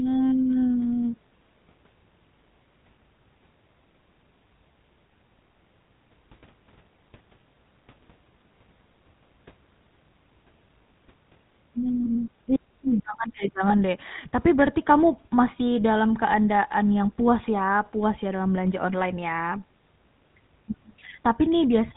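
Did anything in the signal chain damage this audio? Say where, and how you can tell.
Yes. The codec stage damaged it. A GSM full-rate codec runs through the whole clip. Nothing comes through above 4 kHz, and the speech has a buzzy, gravelly roughness. That fits 13 kbps, where the vocal tract is modelled and driven by sparse, regularly spaced pulses.

The network stage caused lost GSM frames. There are brief, rough, metallic rings at 12.04 to 12.08 s, just before "iya ih jangan deh", and at 13.68 to 13.74 s, just after it. Each points to one lost 20 ms frame. The decoder repeated the settings of the last good frame.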